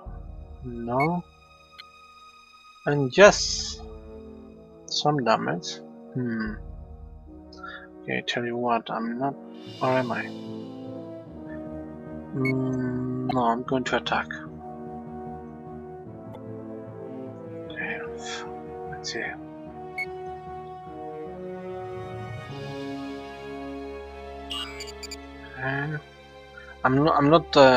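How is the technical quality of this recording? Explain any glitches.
Three short glitches come from damaged data in a compressed stream, at 1.78 to 1.81 s, 13.29 to 13.33 s and 16.34 to 16.36 s. Corrupted bytes make the decoder misread those frames and lose sync. Each gives a brief blip lasting a few tens of milliseconds.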